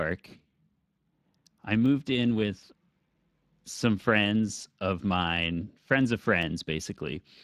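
The whole speech clip carries plainly audible Speex codec damage: voices sound hoarse and grainy, with a noisy edge where the CELP coder runs short of bits for the excitation. The degree of roughness fits a setting somewhere around 22 kbps.

At 1.86 s, 5.37 s and 6.43 s there's a single sharp click each time, a thin vertical line on the spectrogram. That's likely dropped samples, a fraction of a millisecond missing, so the waveform jumps abruptly.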